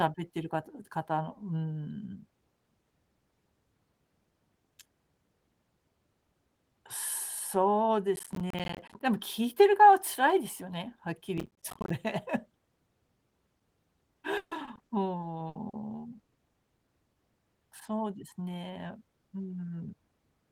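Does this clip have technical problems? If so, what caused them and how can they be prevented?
Yes. Processor overload crackle occurs at 8.16–9.00 s and 11.38–11.90 s. The processor missed run after run of buffers, which sounds like buffers of around 10 ms. Each miss left a short silent gap, so the gaps stack into gritty crackle. Larger buffers or less concurrent processing load would prevent it.

Repeated packet loss (robotic sound) runs from 14.37 to 15.75 s. Eight gaps totalling 360 ms were filled by extending the preceding sound, with the longest at 140 ms. That covers roughly a quarter of the span and gives a choppy, robotic texture. A more stable network path or a deeper jitter buffer would prevent it.

A burst of packet loss at 16.19–16.29 s removed 80 ms of audio. The receiver continued the last sound and faded it across the hole, then resumed later with that section missing. Prioritising voice traffic through QoS or using forward error correction would prevent it.

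Short concealed packet loss at 16.33–16.37 s replaced 20 ms with synthesised continuation blended back into the real signal, leaving a brief smear. Forward error correction, or redundant audio frames, would let the receiver rebuild such small holes and prevent this.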